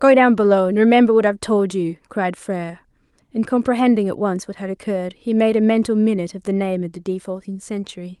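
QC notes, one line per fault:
No faults found in this clip.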